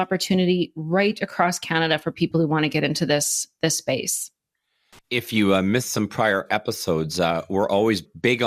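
Speech, with two faults. At 2.32 s, between "right across canada for" and "who want to get", a brief DAB burbling blip appears: residual bit errors corrupt MP2 sub-band data, so short noise blips appear in single sub-bands, unlike broadband clicks. From 4.93 to 4.99 s, just before "if you uh missed", loose connector crackle scratches irregularly as an intermittent contact chops the signal, rougher and less tonal than codec burbling.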